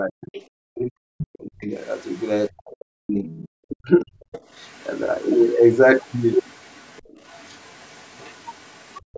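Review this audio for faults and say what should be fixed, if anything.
Speech suppressed in double talk occurs from 0.00 to 1.74 s and from 2.51 to 4.37 s. The voice dips and breaks up for about a second and a half in each span, falling by roughly 40 dB at its deepest. The likely cause is an echo canceller that couldn't separate the talker from loudspeaker echo while both sides spoke, so it attenuated everything. The waveform envelope caves in, and the spectrogram shows harmonics fading or gapping. To prevent it, tune the canceller's double-talk detection so near-end speech isn't attenuated when the far end is also active.

The other side's voice leaking through shows up as short scraps at 0.21–0.45 s and 3.26–3.49 s, about 20 dB under the talker. A quieter, longer stretch runs from 1.19 to 2.25 s and from 4.35 s to the end, around 30 dB down. This is likely residual loudspeaker echo the canceller failed to remove. 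On a spectrogram it appears as faint, separate harmonic traces under the main voice. To prevent it, strengthen residual echo suppression and keep loudspeaker playback level and device coupling low.

Background gated by the echo canceller hits from 9.01 to 9.13 s. The room sound drops by about 40 dB for roughly a tenth of a second while the loudspeaker plays, then returns. The waveform shows a near-flat notch, and the spectrogram a brief dark vertical band, within a band already ending at 8 kHz from normal call processing. To prevent it, add comfort noise or use gentler suppression so the room floor stays continuous.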